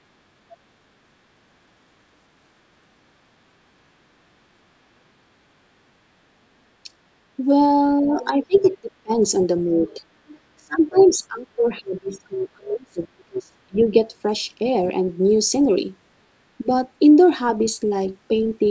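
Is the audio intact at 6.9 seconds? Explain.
No. Speech suppressed in double talk affects the audio from 6.84 to 6.88 s, just before 6.9 s: the speech takes a brief, shallow dip in level lasting about 40 ms. This is likely an echo canceller that, with both sides talking at once, mistook the talker for loudspeaker echo and turned both down.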